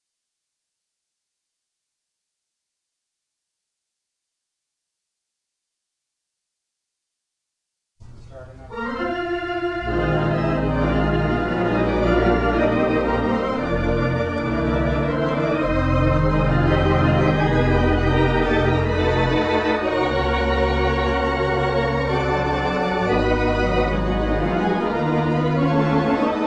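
No audible technical faults turn up anywhere in the recording.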